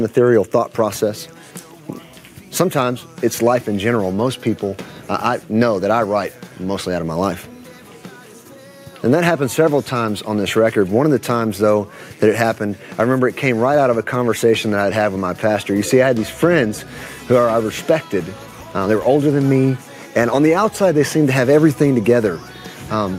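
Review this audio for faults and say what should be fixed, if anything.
Nothing in this audio needs to be fixed, as no faults can be heard.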